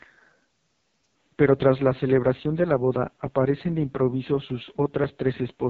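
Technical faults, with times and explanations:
throughout: AMR wideband (HD Voice) codec, heavily damaged. The speech has a rough, raspy, buzzy texture. The codec rebuilds the voice from a coarse vocal tract model and a sparse pulse excitation, and at its lowest rates there are too few bits to capture the waveform's detail. The damage fits the 6.6 kbit/s mode. Nothing is present above 4.4 kHz, so the top of the nominal wideband range is missing.
1.14 s to end: Input switched to a poorer device, likely a change to a different microphone or a headset call profile. A gap of about 20 ms marks the switch. After it the sound becomes duller, with nothing above 4.2 kHz, and drops roughly 5 dB in level. A faint new background noise appears, roughly 45 dB below the speech. That noise comes from the replacement device.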